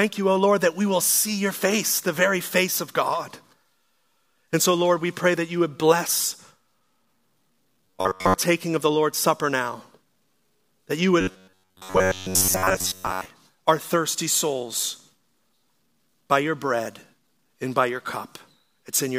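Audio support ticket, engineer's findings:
Robotic sound from repeated short buffers, 7.86 to 8.35 s (ends before "of the") and 11.21 to 13.26 s (between "that you" and "our thirsty"). Fixed metallic buzz at 93.8 Hz, most of the audio replaced. Likely buffer underrun repeating a ~10.7 ms block. Unlike a pitch-shift fault, the buzz pitch stays fixed rather than following the speech.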